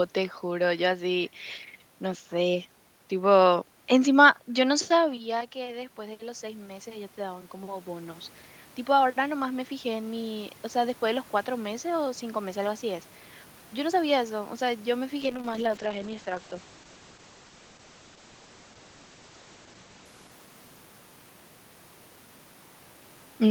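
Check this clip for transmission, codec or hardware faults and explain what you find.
Two system faults are audible, one in gain control and one in the codec.

From 5.07 to 8.29 s there is automatic gain rising. Just after the talker moves away around 5 s, the input falls by about 14 dB, and the automatic gain control slowly adds about 8 dB, so voice and room noise swell together.

From 15.23 to 21.39 s there is a call bitrate drop. The encoder falls from 32 to 9 kbps, staying at its lowest for about 4.3 s, and bandwidth narrows from 20 kHz to 8 kHz. The speech turns muffled and coarse, overlapping the talker's movement near 19 s.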